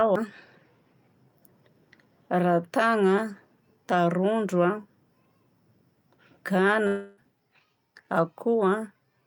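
A likely long network dropout hits this speech at 6.87 s: the stream stops delivering audio until 7.19 s, and the receiver papers over the hole by extending the last sound it had. For nearly the whole gap, about 0.3 s, you hear that continuation as a fading buzz rather than true silence, and when the speech resumes at 7.19 s roughly 300 ms of the original audio is simply gone.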